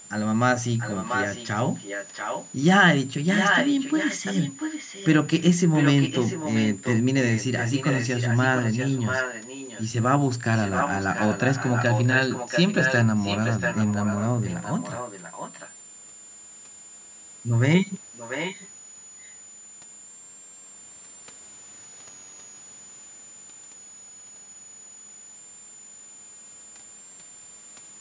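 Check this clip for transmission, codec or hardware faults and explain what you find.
Two faults are present: a constant high whistle and a repeating delayed echo of the speech.

A switching power supply whistle runs throughout. A switching supply in the chain is operating in an audible burst mode or beating with another supply, putting a whistle near 7 kHz, drifting between about 6.8 and 7.4 kHz, roughly 20 dB below the speech.

An echo leak appears from 0.78 to 2.5 s, 3.34 to 5.08 s, 5.73 to 9.91 s, 10.57 to 15.71 s and 18.13 to 18.69 s. It is likely a far-end loudspeaker whose echo canceller let residue through. A copy of the speech trails about 0.69 s behind, roughly 5 to 10 dB below it.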